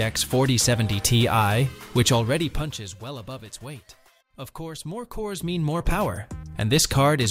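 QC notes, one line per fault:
4.94–6.28 s, zipper noise: during a level move of roughly 15 dB, the gain changes in coarse 1 dB jumps, around ten a second, instead of gliding smoothly. Each jump leaves a tiny discontinuity that clicks, so a fast ticking zip rides on the sound. On a waveform the envelope looks like a staircase; a spectrogram shows faint full-height vertical lines at each step.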